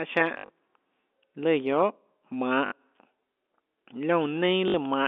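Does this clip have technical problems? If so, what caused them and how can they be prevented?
Yes. Packet loss with last packet repeated produces short robotic stutters at 0.34–0.50 s, 2.66–2.72 s and 4.68–4.74 s. The receiver replayed the previous packet until new audio arrived. The runs buzz near 50 Hz, which fits 20 ms packets. Unlike a plain dropout, the gaps are filled with repeated sound rather than silence. A more reliable network path, plus a jitter buffer with smoother loss concealment, prevents it.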